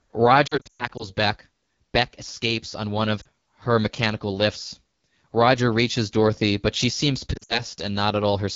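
Throughout, the speech has the rough, raspy grain of the AMR wideband (HD Voice) codec at one of its lowest rates, likely near 8.85 kbit/s. Unlike narrowband AMR, the audio still reaches about 7 kHz, but the top band is shaped hiss, not real detail.

Lost AMR speech frames appear at 0.47 to 1.04 s, with 260 ms lost in patches over about half a second and the longest gap 120 ms. They appear again as a brief 40 ms dip at 3.22 s, and at 7.33 to 7.61 s, with 120 ms lost and the longest gap 60 ms. Unlike a hard dropout or click, the decoder holds the last pitch and vocal tract shape. That produces a warble or smeared tone that fades quickly, then rough speech on recovery.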